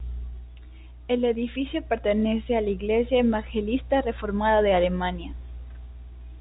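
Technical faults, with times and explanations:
No technical faults are present in this speech clip, which carries the band limit of G.711 telephone coding with nothing above about 3.8 kHz.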